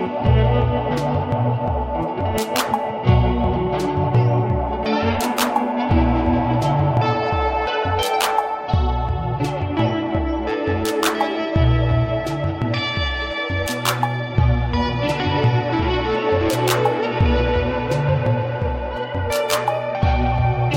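No technical faults are audible.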